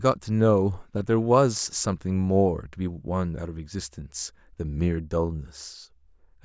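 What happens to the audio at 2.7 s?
Nothing goes wrong at 2.7 s: the speech there comes through intact, with no dropout, click, distortion or other fault.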